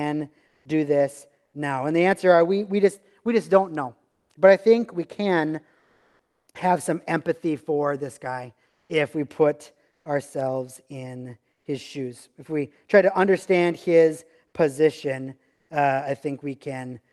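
Speech, with comfort noise in place of the background in six pauses: 0.47, 4.11, 5.79 to 6.47, 8.71, 9.91 and 15.55 s. The real room tone becomes a flat, featureless hiss, about 1 to 5 dB louder or quieter. Likely cause: Opus discontinuous transmission synthesising noise during silence.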